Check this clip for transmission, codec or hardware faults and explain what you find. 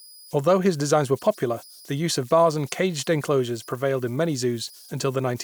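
One hardware fault runs through the whole clip: converter idle tones. The delta-sigma converter lacks dither, so on small inputs it locks into repeating bit patterns. These produce a faint whistle around 5 kHz in the pauses and grainy noise beneath quieter speech, sitting about 28 dB below the signal.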